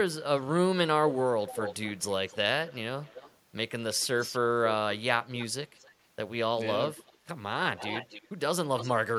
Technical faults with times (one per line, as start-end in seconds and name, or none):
0.21-0.57 echo leak
1.08-3.36 echo leak
4.00-4.39 echo leak
5.37-5.91 echo leak
6.95-7.13 echo leak
7.77-8.28 echo leak
8.78-9.18 echo leak